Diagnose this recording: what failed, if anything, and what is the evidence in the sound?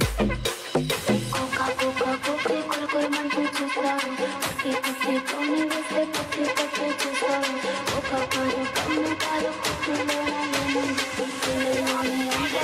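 Jitter buffer speed-up at 2.67–3.53 s and again at 4.40–7.40 s: the receiver's buffer had overfilled after network delay, so it cut pitch-period slices, about 70 ms then about 100 ms in total. The sound runs 6% then 3% fast at unchanged pitch, audibly hurried in the first span.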